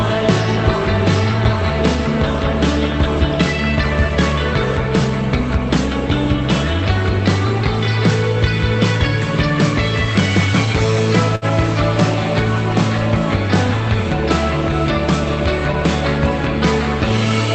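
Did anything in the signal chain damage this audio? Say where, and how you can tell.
Yes. At the network and jitter-buffer stage there is a short stall from a late packet around 11.35 to 11.45 s. The receiver stretched the last sound by about 64 ms while waiting, then resumed, so nothing is lost. On a spectrogram it appears as smeared, frozen horizontal bands, and on the waveform as a repeating pattern.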